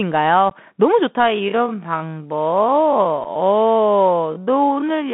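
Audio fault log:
Throughout: Bluetooth CVSD headset codec. The sound passes through a narrowband headset link of about 150 Hz to 3.5 kHz, with nothing above. At 64 kbit/s, each sample only steps up or down, so loud bright passages outrun the adaptive step and distort, sibilants turn scratchy, and a granular hiss sits under everything. On a spectrogram, energy stops at a hard ceiling near 3.5 kHz over a speckled noise floor. The waveform shows flattened, staircase-like peaks on loud syllables.
0.50 and 3.24–3.26: unconcealed Bluetooth headset packet loss. Two short holes appear where voice packets between headset and phone were dropped and nothing was patched in: about 15 ms at 0.50, roughly a couple of packets, and 7.5 ms at 3.24–3.26, about one packet. The sound cuts off abruptly and returns quieter for a moment. The waveform shows sudden gaps with sharp edges, and the spectrogram shows thin vertical blank slots.
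1.16 to the end: time-stretched section. From 1.16 s the pace abruptly drops to half speed while the pitch stays where it was, likely from software lengthening the audio by repeating short pieces. On a spectrogram, harmonics keep the same spacing but events stretch to twice their length, with repeated striations. The waveform envelope broadens and shows periodic grain seams.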